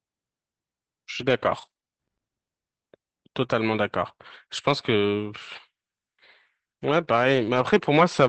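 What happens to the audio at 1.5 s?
At 1.5 s the speech sits inside a stretch of scattered short gaps running from 1.21 to 7.81 s. Packets on the call path, which is Opus at 24 kbps, went missing or arrived late, about five times across that span, and the receiver filled each hole by extending the last sound it had. Each gap is around 20 ms at most, so the result is a brief tick, smear or hiccup rather than an audible dropout.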